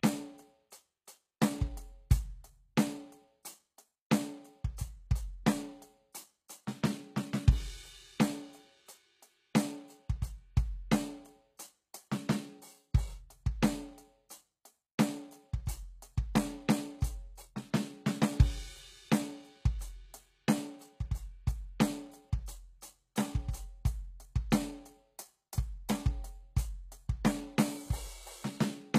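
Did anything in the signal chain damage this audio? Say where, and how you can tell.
Yes. Across the whole piece of music the treble sounds synthetic, with plainly audible coding damage and nothing above 14.9 kHz. This is likely HE-AAC compression at the codec stage, at a very low bitrate around 20 kbps: the encoder keeps only the lower spectrum and rebuilds the top by copying lower bands upward, so its harmonics don't match the original.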